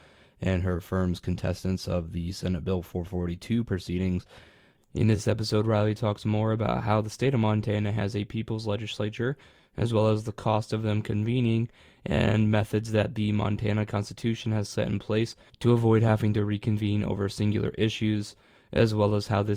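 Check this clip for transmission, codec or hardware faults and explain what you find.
One codec fault turns up in this speech recording. At 4.96 s, just before "this episode", there is a brief blip, a short squeak that peaks at around -30 dBFS. This is a corrupt frame decoded: bits inside a single compressed frame were flipped, and the decoder played it anyway, so misread gains and codes put energy at the wrong frequencies for that instant.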